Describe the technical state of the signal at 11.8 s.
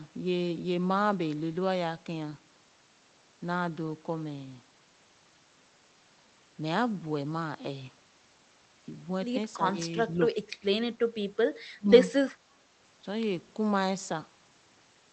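Speech suppressed in double talk sits at 11.76 to 11.9 s. The level of the speech drops sharply, by roughly 25 dB at its deepest, and the affected stretch totals about 150 ms. The likely cause is an echo canceller that could not tell the near talker from loudspeaker echo while both sides spoke, so it pulled everything down. The call-codec band limit near 8 kHz continues through the dip.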